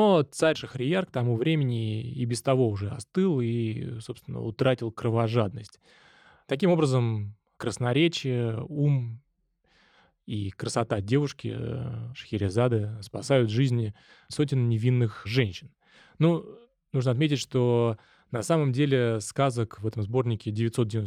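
No faults are audible anywhere in the recording.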